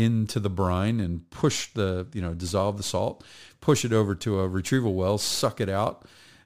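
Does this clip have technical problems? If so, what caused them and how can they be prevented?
Yes. From 1.04 to 3.50 s the speech carries a faint gritty, inharmonic fizz, roughly 30 dB down. This comes from crude rate conversion by linear interpolation, which fits a 32 kHz to 48 kHz change. A properly filtered resampler would prevent it.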